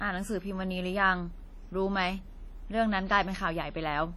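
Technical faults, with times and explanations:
Throughout, WMA compression: the speech has a washy, ringing quality, with a hiss that swells and fades along with the talking. That's the likely signature of a Windows Media Audio encode pushed hard. Its long transform blocks spread quantisation noise over tens of milliseconds around each sound, and the damage here is heavy, which points to a low bitrate somewhere around 32 kbps.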